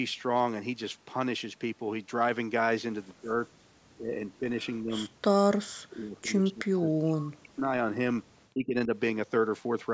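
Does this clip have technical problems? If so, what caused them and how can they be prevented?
Yes. An echo leak appears from 3.09 to 3.14 s as a faint delayed copy about 273 ms behind the speech, very low, around 40 dB down. On a spectrogram it is a weak repeat of earlier harmonics. The likely cause is a loudspeaker-side echo canceller that did not remove all of the echo. Using a headset or better acoustic echo cancellation prevents it.

Speech suppressed in double talk occurs at 3.21–3.56, 3.97–5.07, 5.49–7.98 and 8.54–8.92 s. The voice dips by roughly 20 to 40 dB, deepest in the longest span, and is likely caused by the echo canceller turning down this side's talker along with the loudspeaker echo. The waveform shows sudden troughs, and the spectrogram shows the high bands fading. Headsets or full-duplex-capable echo cancellation prevent it.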